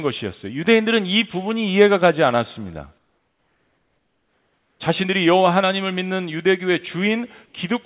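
From 2.98 to 4.8 s, and briefly from 7.46 to 7.54 s, comfort noise replaces the background, likely from discontinuous transmission. It is a flat, featureless hiss, about 5 dB and then about 3 dB quieter. A spectrogram shows smooth, textureless bands under the call's 4 kHz ceiling.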